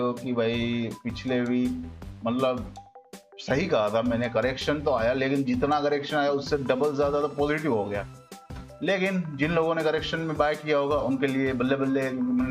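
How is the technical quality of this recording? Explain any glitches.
No glitches or technical faults can be heard anywhere in the recording.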